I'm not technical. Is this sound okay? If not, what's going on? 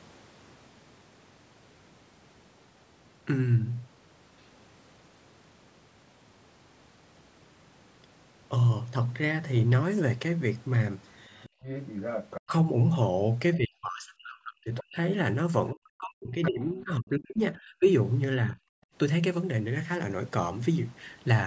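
No. Other side's voice leaking through, 11.24 to 12.41 s, with brief scraps at 14.76 to 14.80 s and 16.43 to 16.50 s: a fainter second voice is audible, likely because the loudspeaker's sound reached the microphone and wasn't fully removed.

Background gated by the echo canceller, 11.49 to 11.62 s and 18.86 to 18.94 s: the room sound suddenly drops away for a split second, because the echo canceller turned the microphone down hard while the loudspeaker played.

Speech suppressed in double talk, 13.56 to 14.97 s, 15.73 to 17.88 s and more lightly at 18.45 to 18.58 s: the talker's voice dips sharply or breaks up, likely because both sides spoke at once and the canceller turned everything down.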